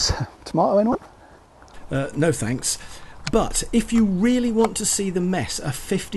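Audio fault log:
0.92–1.05 s, corrupt frame decoded: about five damaged frames play as a loud burst of misplaced spectral energy, not the silence or muted gap a lost packet leaves.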